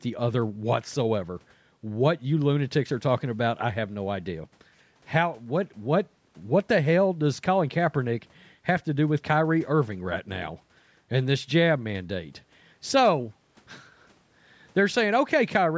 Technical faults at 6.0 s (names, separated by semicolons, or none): none